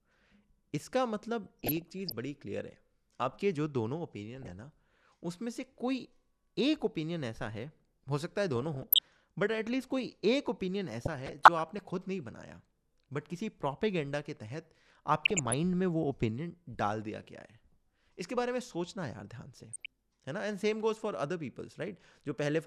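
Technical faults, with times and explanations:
1.46–2.12 s, 4.35–4.52 s, 8.56–9.04 s, 11.01–11.81 s, 15.15–15.54 s and 19.69–19.86 s, DAB burbling: weak reception lets bit errors, at a rate of roughly 0.3 to 0.7 percent, corrupt the MP2 audio data. Individual sub-bands jump in level for up to a frame, which makes the burbling over the speech. The number of affected frames in each burst points to short runs of damaged frames.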